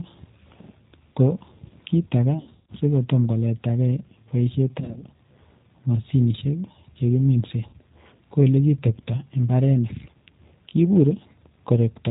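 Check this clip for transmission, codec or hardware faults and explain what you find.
Two faults are present: plainly audible low-bitrate codec coding across the whole recording, and three bursts of packet loss that the decoder conceals.

G.729 codec, throughout: the speech has the rough, slightly synthetic texture of G.729A at 8 kbit/s, and the damage is plainly audible. The decoder rebuilds each 10 ms frame from a vocal tract filter, a pitch predictor and a sparse pulse excitation rather than the waveform itself, so fine detail is lost. Nothing above 4 kHz survives, which dulls sibilants and leaves a narrow, telephone-like band.

VoIP packet loss concealed by the speech codec, at 2.41–2.73 s, 4.80–5.03 s and 7.67–7.74 s: in each gap the decoder repeats its last pitch and filter settings at falling gain, so the sound smears into a buzzy tone or coloured noise that fades. The first event follows "kiit age" and runs up to "si ko toma koleta". 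About 220 ms is missing, scattered over 280 ms, and the longest unbroken run is 140 ms. This is the worst of the three. The second follows "toma koleta gei poishet" and loses 100 ms spread over 160 ms, in runs no longer than 40 ms. The third, between "mosinisiek che kiminse" and "ko ole kitepta imbarenik", loses 60 ms. Because each frame builds on the one before, the sound stays weak or distorted for a short while after each gap before it recovers. The lost durations fit 20 ms packets.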